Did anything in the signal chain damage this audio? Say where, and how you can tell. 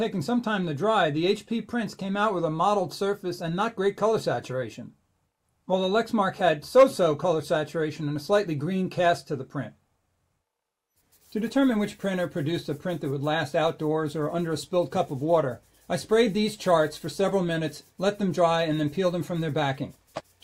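No, the signal shows no sign of damage at any stage of the chain, with no audible faults anywhere in the recording.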